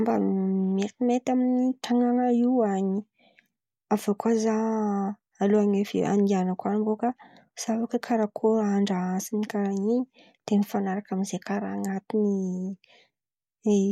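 Speech, with nothing technically wrong with it.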